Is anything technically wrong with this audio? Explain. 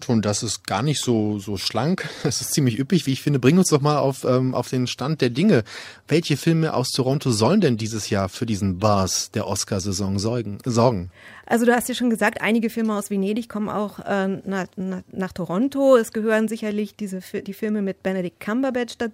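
No, nothing is technically wrong.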